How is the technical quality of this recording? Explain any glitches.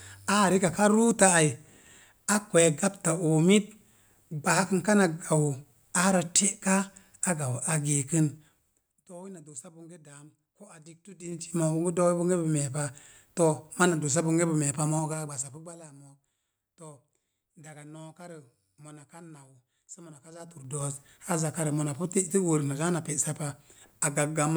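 The recording has a stepped-gain fault: zipper noise at 8.32 to 9.08 s, 11.08 to 11.56 s and 20.28 to 20.84 s. The level is moved in coarse 3 dB jumps, roughly ten to fifteen per second, instead of being ramped. Each jump is a tiny discontinuity in the waveform, so a fast ticking rides on the speech as the level falls by around 20 dB in the first passage and rises by around 20 dB in the other two.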